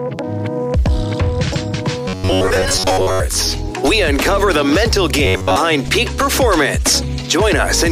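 From 2.08 to 3.20 s, and again briefly from 5.25 to 5.57 s, the sound turns into a stiff, metallic buzz locked at 93.8 Hz. That's robotic sound from repeated short buffers. New audio likely arrived too slowly, so playback kept looping a chunk about 10.7 ms long, and most of the real material in those stretches got skipped. That loop length sets the fixed buzz pitch, while the broad shape of the sound still loosely tracks underneath.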